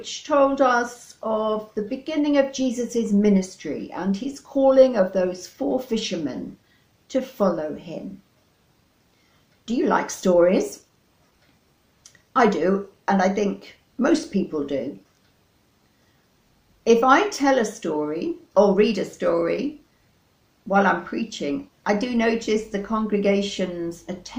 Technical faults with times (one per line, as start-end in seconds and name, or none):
0.00-24.39 clock drift between sender and receiver
0.31-24.11 repeated timing corrections